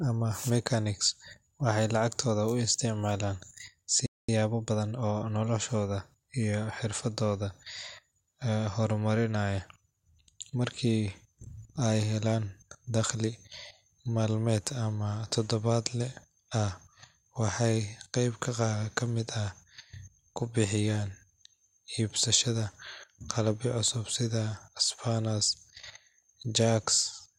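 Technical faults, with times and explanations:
4.06 to 4.29 s, playback stall: the speech cuts to silence in mid-flow for about 0.22 s, then resumes. This is most likely a player that ran short of buffered data or had its audio thread held up. Unlike a dropout or packet loss, the gap is a clean stop of real length rather than a brief click or a smeared fill.
4.29 to 5.17 s, time-compressed catch-up: straight after the stall the speech runs hurried at 1.25 times normal pace for under a second, starting on "noloshooda iyo xirfadooda". The player is working off the backlog the stall built up by trimming tiny slices and cross-fading the joins. The pitch stays where it was, which separates this from a sample-rate or clock mismatch, where faster would also mean higher.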